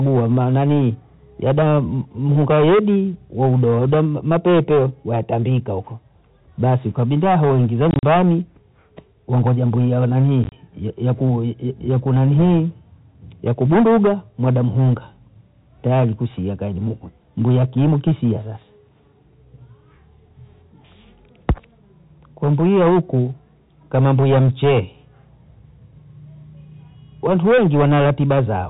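From the first second to the end there's hard clipping. The level is pushed roughly 12 dB past what the chain can carry, so a small but steady share of samples get their peaks sliced flat. Those squared-off tops throw harmonics up toward the top of the telephone band, which with G.711 coding ends at 4 kHz. The result is a gritty fuzz riding on every louder syllable rather than the odd crackle.

Then there's packet loss filled with silence, twice. Right after "basi ukabinda hoi ingiza", from 7.91 to 8.03 s, about 80 ms is missing, scattered across those 120 ms in short bursts of up to 40 ms. After "wangoja mbwia wa", from 10.44 to 10.52 s, about 50 ms drops out, the longest hole being 30 ms. The gaps come in 10 ms steps, which points to 10 ms packets. The receiver just played dead air into each one, so the audio stutters with hard-edged holes.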